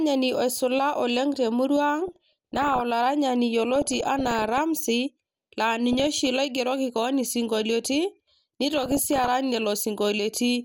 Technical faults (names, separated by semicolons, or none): DAB burbling